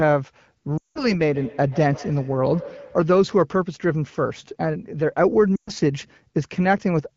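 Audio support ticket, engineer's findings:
Lost AMR speech frames, 0.77–1.12 s and 5.56–5.70 s. Speech smears and drops to silence for roughly 180 ms, then 120 ms, consistent with runs of 20 ms frames failing checksum. The AMR-WB decoder repeats the last pitch and vocal-tract settings at decaying gain. Spectrogram: harmonics stretch flat, fade, gap, then a weak restart. Waveform: envelope collapse.

Feedback echo between two devices, 1.34–3.18 s. Each syllable recurs about every 150 ms, peaking at about −18 dB relative to the direct speech. A second device on the call replays this microphone's signal, which the first microphone picks up again, and neither device's echo canceller removes the other's output. Spectrogram: faint, thinner copies offset at a regular spacing. Waveform: small trailing bursts after each onset.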